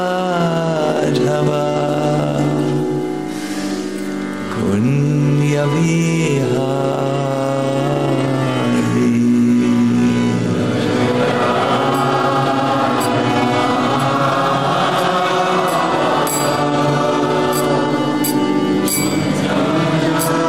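From start to finish there is crude rate conversion. The sample rate was raised without any filtering, and samples appear to have simply been repeated to fill the gaps. The pattern fits a step from 44.1 kHz to 48 kHz. The repeats follow a fixed cycle, so they add shifted, inharmonic copies of the sound itself. The error sits only about 25 dB below the signal. It is heard as a gritty, inharmonic fizz that rides on loud and bright passages.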